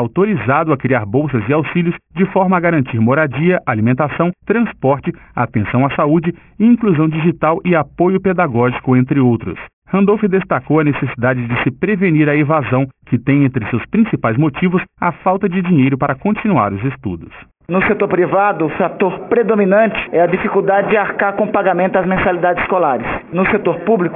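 Aliasing runs through the whole clip. The sound was downsampled with no anti-aliasing filter, which fits a drop from 48 kHz to 6 kHz. Everything above the 3 kHz fold point reflects back down as wrong, unrelated frequencies, sitting roughly 15 dB under the main signal. The top end sounds gritty and metallic rather than simply dull. That sets it apart from ordinary band-limiting: the spectrum stays busy right up to 3 kHz, and the folded tones move against the real pitches instead of with them.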